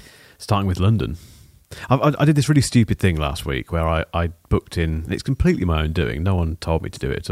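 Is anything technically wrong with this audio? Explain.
No, nothing technically wrong can be heard in this speech recording; the signal stays steady and intact throughout.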